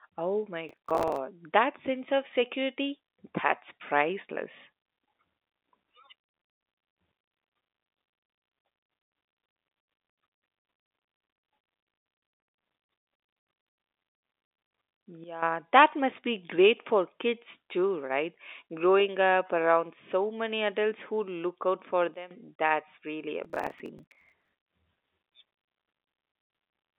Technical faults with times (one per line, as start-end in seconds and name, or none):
0.69-1.17 processor overload crackle
15.24-15.42 sudden gain jump
22.14-22.31 sudden gain jump
23.45-24.52 processor overload crackle